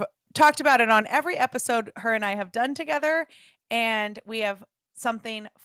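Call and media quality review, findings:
Microphone overload, 0.41–0.99 s: harsh crackle on the loudest peaks of the speech, flattened tops. Likely input gain set too high, driving the signal about 3 dB past converter full scale and clipping a small share of samples.

Lost packet rebuilt from error correction, 0.69–0.71 s and 3.13–3.15 s: brief rough, noisy patch, no dropout. A single 20 ms packet was lost each time and replaced with the low-bitrate in-band FEC copy carried by the next packet.

Microphone volume stepped down, 1.02 s: abrupt level drop of about 5 dB across speech and background, immediately after the clipped stretch. Likely the call software's automatic gain control cutting device input volume in one step in response to the overload.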